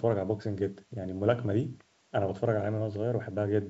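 A speech clip with nothing technically wrong with it.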